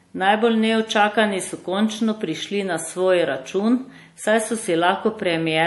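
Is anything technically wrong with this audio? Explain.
Yes, throughout the speech there is plainly audible damage that sounds like MP3 compression, likely from a low bitrate around 48 kbps. Everything above 11.5 kHz is gone, a flat shelf on a spectrogram, and weak frequency lines flicker between frames, leaving a watery, swirly texture, metallic s sounds and smeared attacks.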